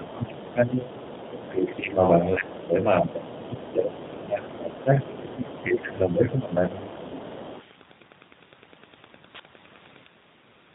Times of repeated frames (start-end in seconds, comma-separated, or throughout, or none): none